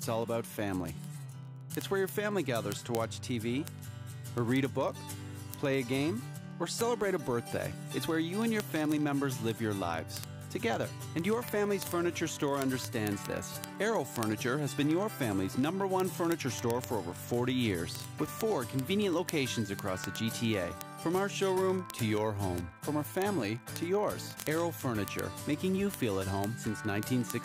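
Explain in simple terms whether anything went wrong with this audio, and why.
From 0.11 s to the end at 27.44 s, ticks sound about fifty times a second. These are word clock ticks: the receiving device runs on its own unlocked clock, so one sample slips at each drift. Unlike random crackle, they keep an even beat.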